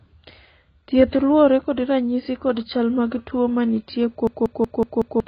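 A speech recording with two faults. Throughout, the sound is dull and band-limited. Nothing reaches above 5.4 kHz. Sibilants and sustained vowels carry a smeared, warbling, fizzy texture. This heavy damage is likely AAC compression at a very low bitrate. The encoder saves bits by cutting the top of the spectrum and coarsely quantising what remains. From 4.27 s to 5.20 s there is a system hang loop. One piece of audio about 186 ms long repeats exactly, five times. It sounds like a machine-gun stutter at about 5.4 repeats per second. The machine froze while the sound hardware kept replaying its ring buffer. The loop length fits an 8192-sample buffer. Roughly a second of real audio is lost behind the stutter.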